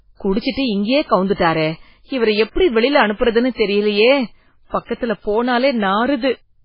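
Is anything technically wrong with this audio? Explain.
Yes. Throughout the speech there's heavy MP3 compression, likely from an encode starved of bits, which fits roughly 16 kbps. Nothing survives above 5.3 kHz, weak frequency components flicker on and off frame to frame, so it sounds watery and swirly, with metallic chirps on s sounds and smeared attacks.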